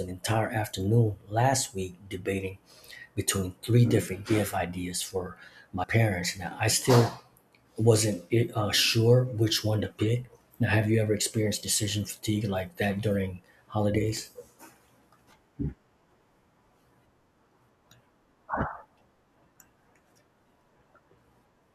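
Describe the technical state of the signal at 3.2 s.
The signal at 3.2 s is intact, with no audible technical fault at that point in the speech.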